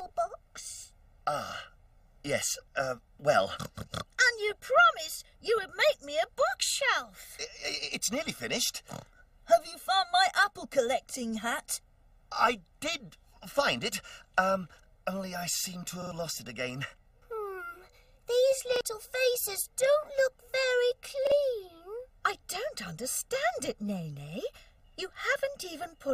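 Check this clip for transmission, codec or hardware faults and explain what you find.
Two faults are audible: a constant comb filter and three buffer repeats.

Channel delay (comb filtering) runs through the whole clip. One channel lags the other by roughly one and a half milliseconds before the two are mixed to mono. Shared content cancels at evenly spaced frequencies, the first near 300 Hz. The result sounds hollow and phasey throughout.

A repeated buffer occurs at 16.02, 18.76 and 21.27 s. The device ran short of fresh audio and replayed its last 46 ms chunk, which fits a 2048-sample buffer. At 16.02 s it plays twice extra, losing roughly a tenth of a second. The later two repeat once, losing about 50 ms each. Each one is heard as a brief stutter with hard joins.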